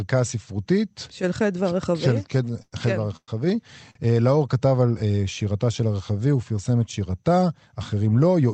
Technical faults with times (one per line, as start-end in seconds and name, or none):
2.62-2.73 call audio freeze
3.17-3.29 call audio freeze
3.91-3.96 short stall from a late packet